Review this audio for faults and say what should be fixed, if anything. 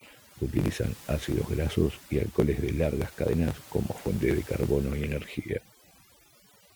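The speech runs throughout over a lowered background that breaks up into twinkling specks: overdone noise removal, where bands near the noise estimate were cut away along with quiet speech detail. Prevent it by setting the noise reduction gentler and checking the result by ear before committing.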